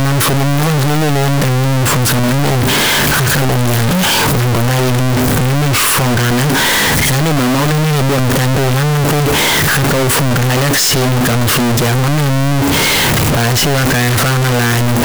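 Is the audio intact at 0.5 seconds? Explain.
No. At 0.5 seconds, as throughout the clip, the speech is blasting and harsh, squared off at a nearly fixed, high level, with background noise as loud as the voice. This is likely float read as integer: 32-bit float samples decoded as integers, so sign and exponent bits set the level.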